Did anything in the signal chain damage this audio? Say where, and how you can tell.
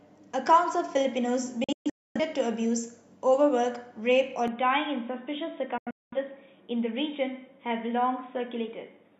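Yes. Digital broadcast dropout at the receiver: 1.64 to 2.20 s and 5.78 to 6.17 s, sound muting in short, quickly faded holes as bad frames get discarded.

From 4.48 s to the end the band stops dead at 3.8 kHz, a little quieter, with a fresh noise floor, likely an input switched to a poorer device.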